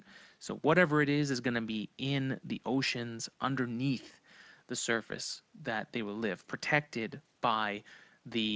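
Nothing stood out on listening to this speech recording.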